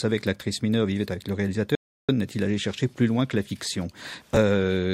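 A speech clip with two separate faults. From 1.75 s to 2.09 s there is an audio dropout to silence: the sound stops abruptly mid-flow and returns just as abruptly about 0.33 s later, with nothing in between, not even room tone. The likely cause is a momentary loss of the input signal, such as a disconnect or a brief mute, while recording carried on. On a waveform this is a flat line with hard edges. On a spectrogram it is a fully black vertical band cutting through every frequency. Then, from 4.01 s to 4.36 s, processor overload crackle tears through the speech as a gritty burst that clears once the overload passes. The processor kept missing its deadlines for short buffers of roughly 10 ms, around thirty of them, and each missed buffer was skipped outright, leaving a tiny hole with sharp edges. On a waveform the trace looks chopped, full of small gaps and abrupt steps. On a spectrogram the stretch is peppered with thin, bright vertical streaks spread across all frequencies.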